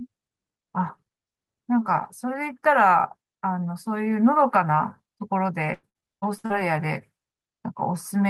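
From 5.73 to 6.52 s the speech breaks into repeated packet loss with a robotic sound. Six gaps, the longest 97 ms, are patched by extending the previous sound. On a spectrogram this shows as frozen, smeared harmonic bands with hard vertical edges between them.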